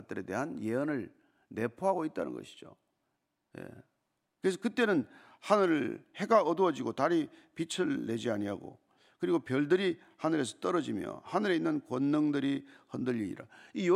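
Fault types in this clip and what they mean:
Nothing stood out on listening to this speech recording.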